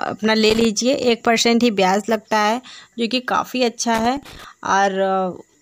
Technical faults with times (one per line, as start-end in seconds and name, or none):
0.46-0.65 loose connector crackle
3.94-4.44 loose connector crackle